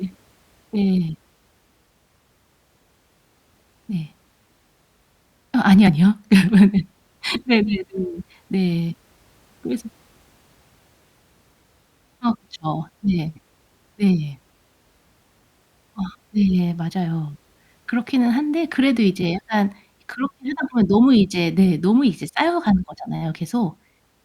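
The decoder skipped compressed frames twice, so the audio jumps ahead instead of playing continuously. At 5.87 to 5.90 s, roughly 70 ms of speech vanishes, which fits about three 20 ms frames lost or rejected as damaged. At 7.35 s a shorter gap, around one frame, drops out.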